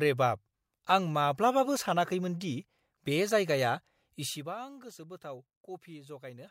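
No technical faults can be heard anywhere in this speech clip.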